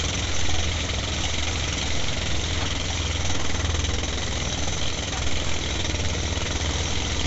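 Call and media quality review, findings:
Nellymoser compression, whole clip, 0 to 7.3 s: rough hissy halo, smeared underwater texture, plainly audible. Likely Nellymoser Asao encoder; fixed low bit budget per 256-sample block, starved bands noise-filled, consistent with about 32 kbps. Spectrogram: hard ceiling at 7.7 kHz, blocky time-smeared energy, flat noise patches replacing weak bands. Waveform: transients softened, envelope grainy.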